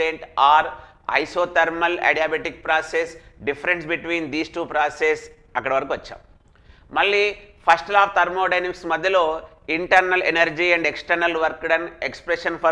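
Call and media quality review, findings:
Nothing to flag here; the audio came through without any problem worth logging on this one.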